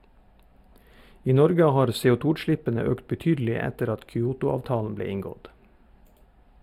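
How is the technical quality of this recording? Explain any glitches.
The recording has one fault, channel delay (comb filtering), present for the whole speech clip. One channel arrives late by a tiny interval, around 0.07 ms, which suggests a delay of only a few samples. When the two channels are summed to mono, the shared material cancels where they fall out of phase, leaving a first notch near 7 kHz. The result is a dulled, phasey top end. Unlike a low-pass roll-off, content above the notch returns. Unlike flanging, the notch never moves.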